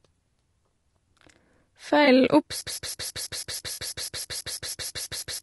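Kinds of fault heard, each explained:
Low-delay AAC compression: the speech sounds rough and grainy throughout, likely from AAC-ELD near 32 kbps, with smeared harmonics and noise filling between them on a spectrogram.
AAC frame loss with concealment: brief smeared, noisy patches near 2.05 s and 3.73 s, about 20 and 40 ms, showing as blurred spectral columns without harmonic detail.
Broken-record loop: from 2.61 s to the end, a fragment of about 163 ms repeats back to back, likely a stalled stream, visible as identical repeating waveform blocks.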